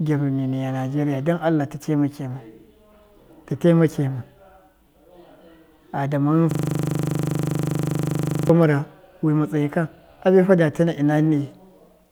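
Speech with a system hang loop from 6.51 to 8.50 s: a 40 ms fragment repeats exactly, 50 times, producing a rattling 25 Hz buzz. Unlike network packet-loss stutter, the repeats are identical and perfectly periodic, fitting hardware cycling a frozen 40 ms buffer.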